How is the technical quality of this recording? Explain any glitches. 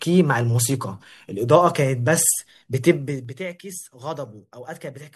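One glitch stands out: zipper noise from 2.91 to 3.38 s, where the gain drops about 15 dB in unsmoothed 2 dB steps, roughly 20 per second, producing a rapid ticking zip over the speech.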